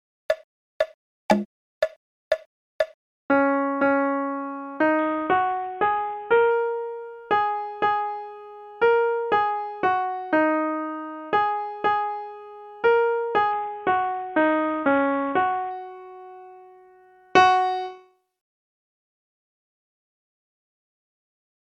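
From 4.99 to 6.51 s and 13.52 to 15.71 s, a Bluetooth SBC bit pool drop dulls the treble and adds gritty noise, consistent with roughly 50 kbps. Unlike packet loss, the sound never cuts out.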